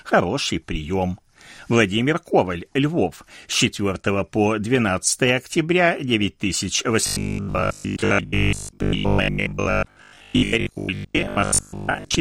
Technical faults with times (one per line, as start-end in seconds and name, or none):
7.06-12.20 robotic sound from repeated short buffers